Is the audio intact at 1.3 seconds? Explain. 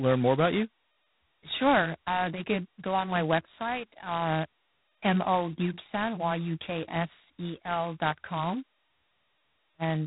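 No, at 1.3 s you're hearing G.726 ADPCM damage throughout: a harsh, rasping hiss riding the speech level, nothing above 3.9 kHz, which fits 16 kbit/s coding.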